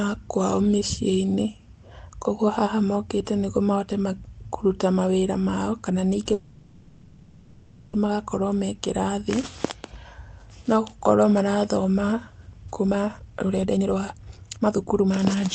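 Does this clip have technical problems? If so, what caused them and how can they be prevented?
Yes, there are two faults.

From 6.33 to 7.95 s, just after "mawĩra mao kana ningĩ", the speech stalls. The last sound stretches into a fading buzz or hiss for about 1.6 s. Then it resumes exactly where it stopped, with nothing lost. This is likely a call audio freeze: packets were held up in transit, the jitter buffer ran dry, and the receiver filled the wait. A steadier network path, with less congestion and fewer route changes, prevents it.

From 12.66 to 15.49 s, after "no gũkorwo marathoma", the speech races at 147% of normal speed. The pitch stays the same, so it just sounds hurried. This is a jitter buffer speed-up. The buffer held too much delayed audio, so the receiver cut many short pitch-period slices in a row, roughly a second and a half in total. Smoother packet delivery, or gentler buffer catch-up settings, would prevent it.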